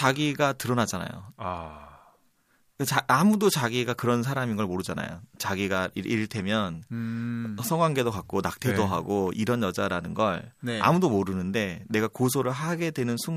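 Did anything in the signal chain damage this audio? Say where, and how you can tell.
Yes. USB whine from 8.39 to 10.78 s: a faint fixed tone at 8 kHz, strongest at 16 kHz, from 125-microsecond bus microframes leaking through power or ground wiring.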